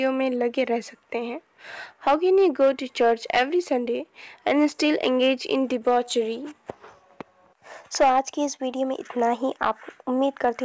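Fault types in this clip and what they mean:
hard clipping: Peaks driven about 10 dB past full scale are cut flat, giving crackle on loud moments. The waveform shows squared-off tops, and the spectrogram shows brief vertical streaks of added harmonics.
clock drift between sender and receiver: The sending clock runs roughly 2 percent slow, so the receiver's buffer keeps draining. This produces recurring, unevenly spaced timing hiccups across the whole clip, visible as small splice irregularities in the waveform.
repeated timing corrections: From 0.00 to 10.47 s the receiver repeats short pieces to keep pace, playing at 98 percent speed and adding around a fifth of a second. The spectrogram shows slightly stretched, duplicated segments.
short stall from a late packet: At 8.56 to 8.60 s the buffer ran empty, so the last sound was held for 20 ms, with nothing lost. The waveform shows a briefly repeated cycle and the spectrogram a short smeared band.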